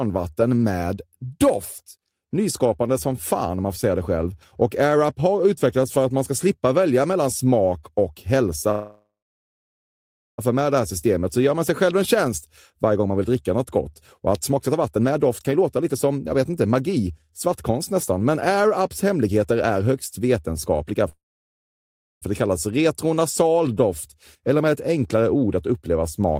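At 8.71 to 10.40 s a call audio freeze holds the speech. The last sound fades to about 1.3 s of silence, likely from delayed packets draining the jitter buffer. Speech then resumes with nothing lost.

From 14.51 to 20.94 s a jitter buffer speed-up trims pitch periods to shed about a second of backlog. Speech runs at 115% with pitch unchanged and sounds hurried.

A second freeze, 21.09 to 22.24 s, is mostly silent before "för det kallas retronasal".

At 24.35 to 25.57 s, between "det kallas retronasal doft" and "att uppleva smak med", a milder speed-up runs at 109%.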